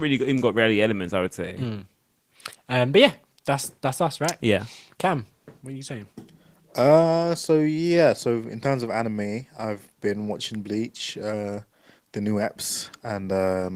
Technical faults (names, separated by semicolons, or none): none